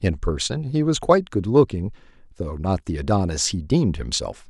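Speech recording, no audible technical faults found.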